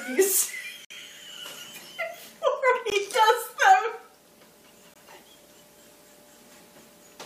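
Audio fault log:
0.85–0.90 s, 2.90 s, 4.94 s: gap between stream segments. Hard-edged silences of about 56 ms, 17 ms and 19 ms recur at roughly 2.0 s intervals, matching the segment length. Mismatched segment timestamps leave holes the player fills with silence, so no audio is lost.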